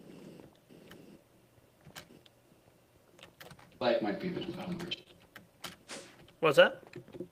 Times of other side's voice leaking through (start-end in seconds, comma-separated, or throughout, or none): none